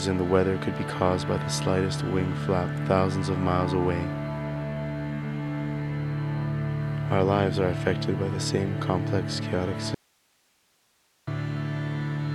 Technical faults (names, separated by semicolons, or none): audio dropout to a faint residue